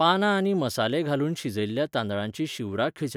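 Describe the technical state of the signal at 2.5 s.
At 2.5 s the speech signal is intact, with no audible technical fault at that moment.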